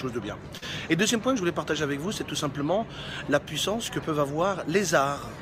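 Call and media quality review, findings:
Brief smear/wobble at 0.57–0.64 s. Short concealed packet loss: about 40 ms missing at decoder, jitter buffer/PLC extrapolated last sound, then crossfaded back into received audio.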